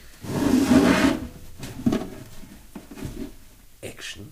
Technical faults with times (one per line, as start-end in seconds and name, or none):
none